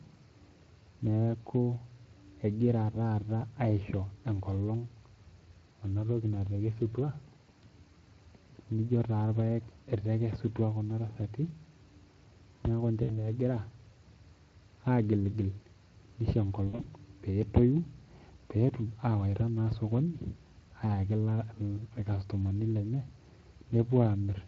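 Throughout the speech, Speex codec damage is plainly audible, and the coding fits a bitrate around 20 kbps. The CELP coder has too few bits to model the excitation faithfully, so the voice carries a hoarse, grainy roughness, with noise riding under each syllable. On a spectrogram the harmonic striations look blurred and speckled, with the gaps between harmonics filled by a noisy haze rather than staying clean and dark.

From 13.03 to 13.24 s comes the first VoIP packet loss concealed by the speech codec, covering about 60 ms of missing audio. With no new data, the decoder kept replaying its last pitch and filter at falling gain, and the sound smears into a short, fading, frozen stretch. Its damage lingers as the decoder's history recovers. A spectrogram shows flat, unchanging horizontal bands where speech should move, and the waveform shows a repetitive, decaying envelope.

A second concealed loss runs from 16.67 to 16.87 s, with about 120 ms missing, scattered across roughly 160 ms, and the longest single gap is 60 ms. 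The result is a choppy stretch in which the voice alternates between brief, frozen stretches and weakened, distorted recovery. On the waveform the amplitude dips and stutters in several small steps, and the spectrogram shows short smeared patches of static harmonics broken up by partial returns.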